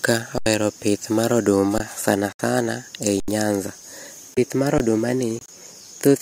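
Starting at 0.38 to 0.46 s there's an underrun with held sample: the output buffer ran dry and the converter just sat on its last value, so the waveform freezes flat and the sound stops with barely a click. Around 70 ms of live audio was lost. The same thing happens at 1.78 to 1.80 s, right after "pith mar" and before "sana sana ei nyanza".

From 2.32 to 2.41 s, just before "sana ei nyanza", a corrupt frame muted fault appears. Damaged compressed frames were rejected by the decoder and replaced with silence, leaving an abrupt hole that points to about three frames.

Another underrun hits at 3.20 to 3.28 s, after "sana sana ei", again losing about 70 ms.

A short muted gap follows at 4.34 to 4.38 s, about one frame's worth. Then there's a brief underrun at 4.78 to 4.80 s, and finally a longer silent hole at 5.39 to 5.50 s, roughly four frames long. Timing stays intact across all the muted gaps.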